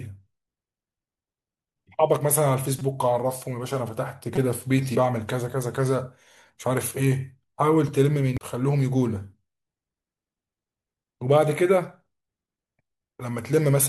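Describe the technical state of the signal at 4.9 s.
Damaged data in the compressed stream at 4.94 s makes the decoder misread a frame and lose sync, producing a brief chirp or blip in the speech.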